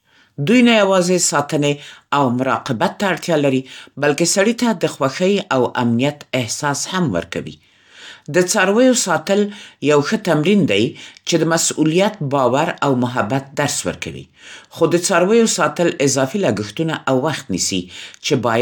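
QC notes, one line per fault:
No technical faults detected across the whole recording.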